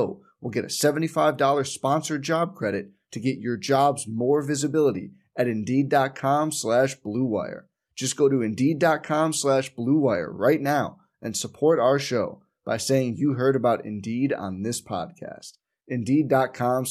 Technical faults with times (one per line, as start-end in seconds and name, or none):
none